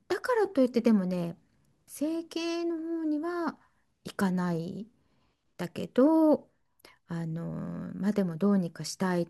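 Speech recording, no technical faults detected anywhere in the clip.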